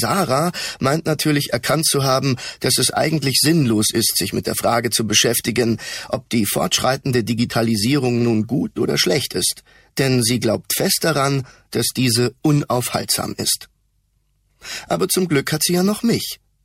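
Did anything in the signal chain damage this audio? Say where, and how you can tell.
No, nothing in the signal chain damaged this audio.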